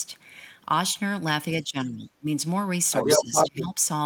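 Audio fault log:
1.62–2.27 s and 3.04–3.79 s, speech suppressed in double talk: the talker's speech sinks and thins out in two stretches, by around 20 dB at its worst in the first and around 15 dB in the second, then recovers. Likely cause: the echo canceller couldn't tell the near talker from the loudspeaker echo while both sides spoke, so it pulled everything down. The second dip overlaps the leak below.
2.91–3.62 s, other side's voice leaking through: a second voice comes through alongside the talker, roughly 5 dB louder than the talker's own speech. Likely cause: the loudspeaker's playback got into the microphone and the echo canceller didn't fully cancel it.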